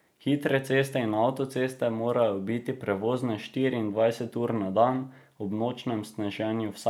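No technical faults are audible anywhere in the recording.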